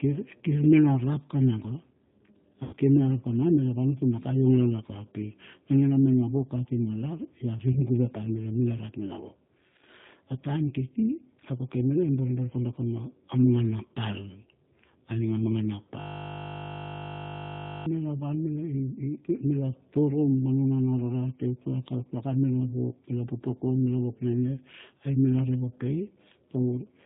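Speech passed through a G.729 codec sounds rough and synthetic throughout, consistent with 8 kbit/s, and a spectrogram shows nothing above 4 kHz. VoIP packet loss concealed by the speech codec appears at 2.63–2.75 s, a gap of about 100 ms that fits five lost packets, and at 7.72–7.81 s, about 40 ms. There the decoder stretches its last frame into a fading buzzy tone or coloured noise, seen as smeared, decaying energy. From 16.01 to 17.86 s a system hang loop repeats one 20 ms buffer, producing a steady 50 Hz buzz and an identical repeating waveform cycle.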